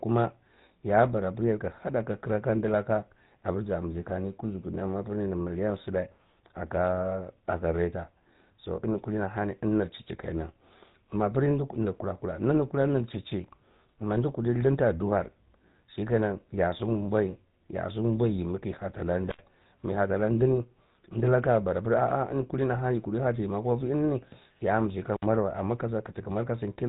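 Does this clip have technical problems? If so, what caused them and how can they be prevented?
Yes. The speech has the buzzy, gravelly roughness of the GSM full-rate codec throughout. It models the vocal tract and excites it with sparse regular pulses, so the damage is plainly audible. Nothing above 3.8 kHz survives, which fits a 13 kbit/s link. Using a wideband codec prevents this.

An intermittent contact opens twice. The first is at 19.29 to 19.41 s, after "kiyi heta lan", and the line is open for 73 ms. The second is at 25.14 to 25.25 s, before "wa amma ke", and lasts 58 ms. Each time the sound drops out with crackle at the edges. Securing or replacing the loose cable or plug prevents this.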